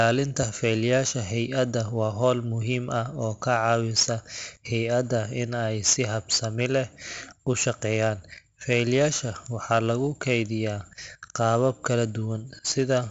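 Throughout, heavy 4-bit ADPCM compression leaves gritty hiss riding the speech's level, not codec warble, with nothing above 7.7 kHz, which fits a 64 kbps stream.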